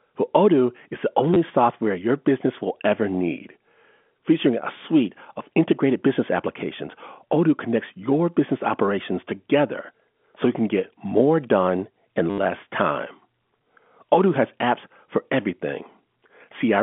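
At 1.34–1.36 s, between "is the" and "software your business will", and at 12.3–12.38 s, before "less time", packet loss with last packet repeated replays audio to fill 20 ms and 80 ms gaps. The longer run buzzes robotically near 100 Hz, which suggests 10 ms packets.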